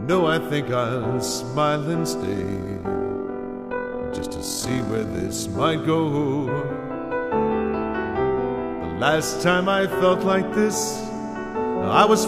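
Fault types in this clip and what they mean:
Overlap-add ripple: from about 2.21 to 5.31 s the sound picks up a fast, gritty flutter, like a robotic tremolo sitting on top of it. The audio was split into windowed frames and stitched back together with an overlap that doesn't add up to a steady gain, so the level dips and swells once per frame. Here that's a swing of about 6 dB, cycling at around 40 Hz.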